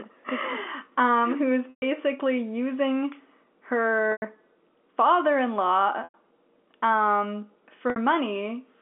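Packet loss with pitch repetition at 1.70 s after "um who's", 4.12 s, 6.04 s after "father in law", and 7.90 s. Each 60 to 120 ms gap is bridged by a repeated pitch period that fades out, heard as a brief buzzy hold that fades into silence before the speech returns with a short cross-fade.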